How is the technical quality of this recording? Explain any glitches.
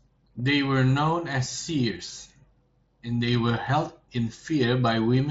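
There are no glitches in this recording. The speech comes through a Bluetooth mSBC headset link, which limits it to wideband audio up to about 8 kHz and adds a light grain on the louder sounds, as that codec normally does.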